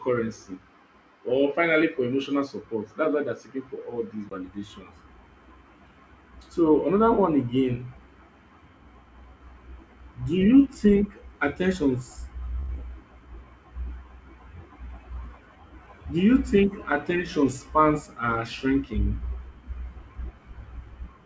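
At 12.60 s, right after "do you think attentions", there is a short stall from a late packet. A packet came in after it was due, so the jitter buffer ran dry. The receiver held the last sound in place for about 89 ms until the packet showed up. Then it resumed exactly where it stopped. No speech is lost. Instead a sound hangs on too long, ending at 12.71 s. The hold adds 89 ms of delay.

Just after that, from 12.75 to 12.78 s, comes a short concealed packet loss. About 40 ms of audio never reached the decoder. The receiver covered the gap by extending the preceding sound for only 8 ms before blending back into the real signal. The rest of the gap is simply skipped, which trims back roughly 30 ms of the delay just added. You hear a quick smear or wobble, and a brief sound there may drop out.

From 13.20 to 13.46 s, a jitter buffer slow-down follows. The buffer needed to rebuild its reserve. 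So the receiver repeated single pitch periods or slices of pause again and again. This adds 37 ms in total. The speech plays at about 88% of normal pace. The pitch stays the same. Sounds come out drawn out, and a faint warble may creep in.

From 15.34 to 16.07 s, just before "do you think attention", there is a jitter buffer speed-up. The buffer now held more audio than its target. So the receiver cut out short pieces, each one or a few pitch periods long, in quick succession. Roughly 100 ms is removed. The speech runs at about 113% of normal pace with unchanged pitch, and it sounds hurried. Through all of this the G.722 call path, at a level consistent with 64 kbps, carries nothing above 8 kHz.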